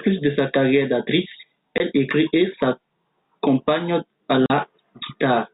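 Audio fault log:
1.78 to 1.80 s and 4.46 to 4.50 s: packet loss filled with silence. The first gap is 20 ms, just after "de sa carrière d'actrice". The second is 40 ms, just after "écrit et s'accompagne à". Audio stopped arriving and the receiver played silence in its place. The gap lengths fit one lost 20 ms packet, then two. The sound is cut off abruptly and resumes abruptly. The narrow G.711 telephone band is heard on either side of both holes.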